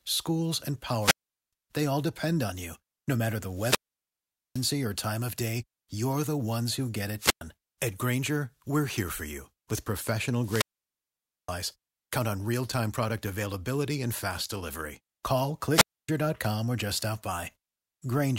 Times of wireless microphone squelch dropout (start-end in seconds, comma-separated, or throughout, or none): 0.99-1.53, 3.53-4.68, 7.18-7.41, 10.40-11.56, 15.70-16.09